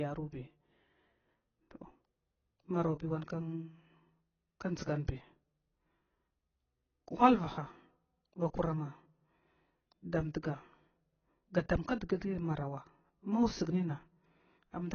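All the way through, the speech is dull and smeared, with nothing above 6.6 kHz and a warbly, fizzy edge on sibilants. That's likely heavy AAC compression, the kind an AAC-LC encoder at about 16 kbps produces, where it cuts the top end and starves bands of bits.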